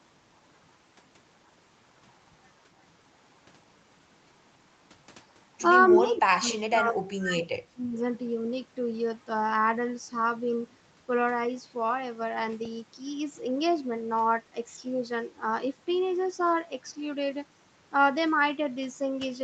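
From 5.94 to 6.18 s a faint delayed copy of the speech sits underneath, trailing the original by 255 ms and roughly 15 dB below it. This is an echo leak. The far end was probably playing the call through a loudspeaker, and its echo canceller failed to remove everything the microphone picked up. The leftover was sent back, so a short ghost of the speech can be heard for about a quarter of a second.

Starting at 5.98 s and lasting until 7.96 s, the speech drops away in an uneven, choppy way. In places the level falls by around 30 dB, and the dropouts cover roughly two seconds. This matches speech suppressed in double talk. Both sides were talking at the same moment, and the canceller could not separate the local talker from the returning echo, so it turned everything down. The talker is pushed into the background and breaks up while the overlap lasts.

At 12.65 s there is a tiny click with a hint of buzz, caused by a repeated buffer. 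Fresh audio did not arrive in time, so the same 1.3 ms piece was played three times in a row, with a hard join at each repeat. That length points to a 64-sample buffer. Only about 3 ms of audio was lost, so the fault is heard as a click rather than a stutter. Above 8 kHz there is no content, which is consistent with Opus in a call operating at that bandwidth.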